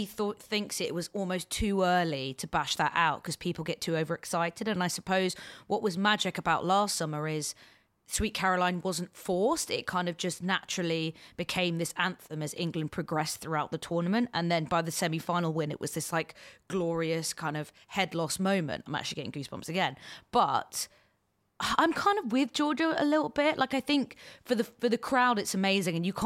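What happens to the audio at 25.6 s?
At 25.6 s the speech carries on intact, with no dropout, click, distortion or other fault at that point.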